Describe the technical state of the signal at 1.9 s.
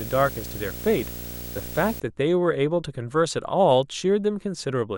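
At 1.9 s the speech still carries video or display buzz, present from 0.0 to 2.0 s. A display or video cable couples into the audio path, giving a 59.94 Hz buzz with hash above it, a thin 15.7 kHz line tone, roughly 10 dB below the speech.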